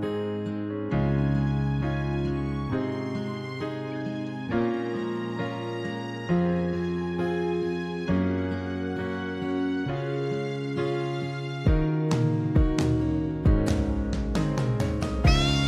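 No technical faults are audible anywhere in the clip.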